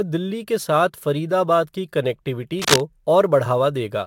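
Throughout the speech there is sample clock jitter: the converter's timing wanders by a few microseconds, so each sample is caught a little early or late. Because the resulting error follows how steeply the waveform is changing, it shows up as a rough, hissy grain, roughly 30 dB below the speech, that swells on loud and sibilant syllables and disappears in the pauses. On a spectrogram this appears as diffuse high-frequency fuzz clinging to the voiced energy, with clean gaps between phrases.

From 2.59 to 2.81 s, a burst of cable scratch noise cuts across the speech: a dense, irregular scratching or rustling about as loud as the voice itself. The likely cause is a worn cable, connector or control being moved, its contact resistance jumping rapidly. In the waveform it looks like a cluster of jagged, uneven spikes superimposed on the signal. On a spectrogram it forms a broadband, speckled smear of vertical streaks lasting about a fifth of a second.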